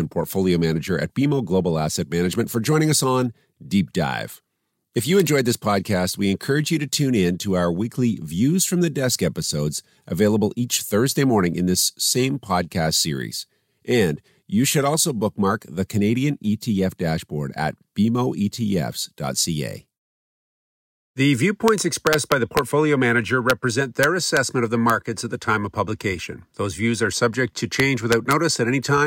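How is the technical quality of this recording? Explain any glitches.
The recording has repeated integer overflow on loud speech peaks: single cracks at 5.20 s, 21.68 s, 23.50 s and 24.90 s, and bursts from 22.07 to 22.59 s, 24.03 to 24.37 s and 27.80 to 28.33 s. Peaks only 0 to 1 dB over the integer limit wrap to the opposite sign, producing harsh cracks far sharper than ordinary clipping.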